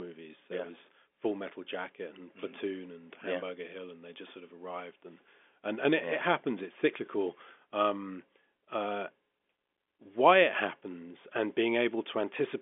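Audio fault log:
No faults heard in this speech.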